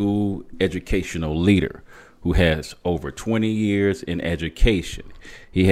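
No technical faults can be heard in this speech recording.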